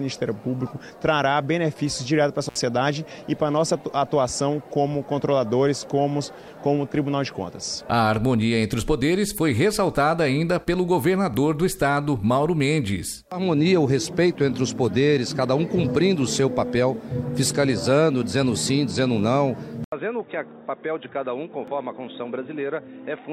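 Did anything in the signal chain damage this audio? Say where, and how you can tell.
Yes. At 2.48 s the sound cuts out for about 64 ms, with crackle at both edges and only faint hiss in the gap before it returns by 2.57 s. That is an intermittent contact in the analogue wiring: a loose plug or cable conductor briefly opened, so the signal path broke. The crackle is the contact scraping as it separated and remade, and the hiss is what remained of the line while it was open.

At 11.34 s and again at 21.68 s there is an abrupt jump in the sound but no silence. The first skip loses only a few milliseconds and the second around 15 ms. This is likely a dropped buffer (overrun) at the driver or buffer stage. The recording software fell behind, the hardware overwrote samples it had not yet collected, and the audio on either side of the lost block was spliced together directly.

From 19.84 s to the end, after a gap of about 80 ms, the sound turns dull and boxy. 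It is also about 10 dB quieter, and a new noise floor sits roughly 45 dB below it. The most likely cause is the input switched to a poorer device at the converter stage, such as a second microphone or a headset call profile. That device's narrower band, different gain and own self-noise replaced the original input from that point onward.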